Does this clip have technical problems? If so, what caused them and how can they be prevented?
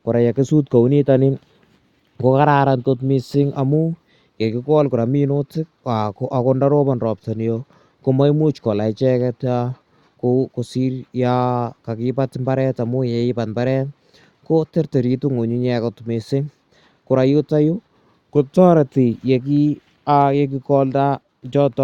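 No, the speech signal has no technical faults, so nothing here needs a cause or a prevention step.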